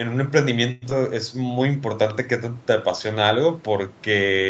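At 0.71 s the speech stalls for about a tenth of a second, until 0.84 s. Instead of dropping to silence, the last bit of sound gets stretched into a short fading buzz, and then the talker picks up right where they left off. That's a call audio freeze, likely from packets getting held up in transit so the jitter buffer ran dry and had to improvise about 105 ms of filler. Nothing's actually lost; a gap was just slipped in.

Right after, between 0.90 and 0.93 s, there's a skip ahead. A chunk of roughly 70 ms gets dropped and the two sides are stitched together almost seamlessly, with only a sliver of filler. You hear it as a tiny jump, like a piece of a syllable went missing. That's the receiver shedding the backlog the freeze built up, pulling the delay back down.

Then from 1.33 to 1.64 s there's a jitter buffer slow-down. The receiver repeats single pitch periods over and over to rebuild its reserve, adding 48 ms. 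The speech runs at about 87% speed with the pitch unchanged, so sounds get drawn out, with maybe a faint warble. The audio around these spots has the 8 kHz top end you'd expect from an Opus call link, which is normal for that path.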